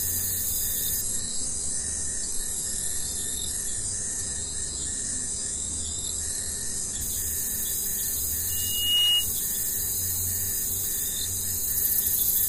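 From 1.01 s to 7.01 s the audio drops to a lower-bitrate version of an adaptive stream. Quality falls abruptly with no gap, nothing remains above about 11.4 kHz, and the top end turns thin, which fits a switch from a roughly 96 kbit/s AAC stream to a very low-rate HE-AAC one. The gapless switch and the hard spectral ceiling set it apart from a network dropout, which would leave silence or a stutter.

From 8.49 s to 9.29 s a loudspeaker feedback squeal appears at 2.9 kHz. A microphone is picking up the speaker it drives, and at that frequency the loop gain exceeds one, so the tone grows by itself, swelling over about half a second until it sits a few dB above the rest of the sound. That self-sustaining build from nothing distinguishes it from a steady interfering tone, which would hold a constant level throughout.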